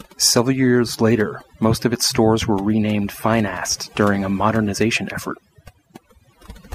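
Overdone noise removal runs through the whole speech clip. A noise reduction stage was pushed far too hard, so any frequency band whose level sat close to its noise estimate got pulled down sharply or shut off altogether. Quiet detail in the voice fell below that line and vanished with the background noise. Between phrases the background drops to near silence speckled with twinkling artefacts.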